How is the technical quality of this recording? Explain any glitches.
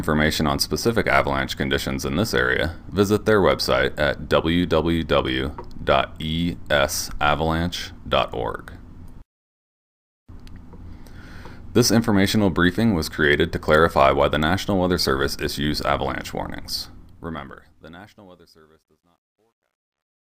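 The only glitch is in the closing fade. Truncation distortion on a fade runs from 16.75 s to the end at 20.25 s. The fade-out, which starts around 16.75 s, seems to go through an undithered stage, which fits 12-bit resolution, so the waveform breaks into coarse steps. From 18.12 s the tail turns gritty.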